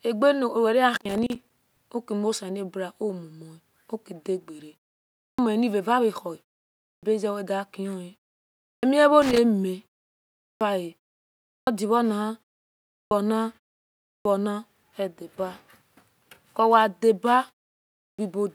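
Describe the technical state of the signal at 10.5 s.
At 10.5 s the signal is inside a clipped start after a pause. The span runs from 10.31 to 10.61 s. About 300 ms of speech is missing there. It follows a pause of about half a second. During that gap the output device went idle. It then needed time to wake and lock again. The opening of the next phrase was swallowed. Speech cuts in abruptly from silence, without its first sounds.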